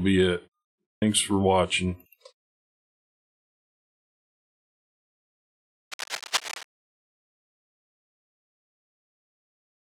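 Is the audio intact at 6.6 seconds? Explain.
No. Cable scratch noise runs from 5.91 to 6.64 s, so 6.6 s falls near its end. Dense, uneven bursts of scratching and rustling sit over the sound, roughly 10 dB below it. The likely cause is a worn cable, connector or control being moved: its contact resistance changes rapidly and erratically, injecting this irregular noise into the signal for as long as the movement lasts.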